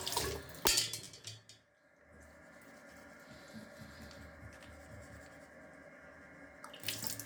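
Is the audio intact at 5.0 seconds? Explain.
No. From 4.98 to 5.0 s there is a repeated buffer fault. New audio did not reach the output in time, so the device replayed the last block it held, two extra times, each about 10 ms long. The same tiny fragment sounds back to back with a hard edge at each join. At this short length it comes across as a brief click or buzz rather than a clear stutter. Essentially no audio is lost.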